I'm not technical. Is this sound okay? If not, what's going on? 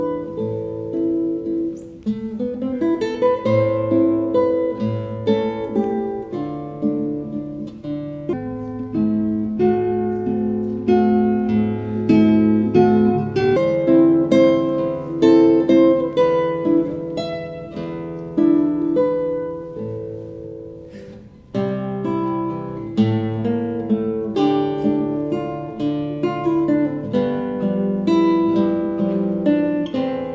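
No. From 8.33 to 13.56 seconds the sound turns slow and deep, playing at roughly three-quarters of its proper speed and about five and a half semitones lower, as if dragged. This is a wrong sample rate fault: the audio was played back more slowly than it was recorded, with no correction. That stretches time and drops pitch together, and the amount fits sound captured at 22 kHz but played at 16 kHz.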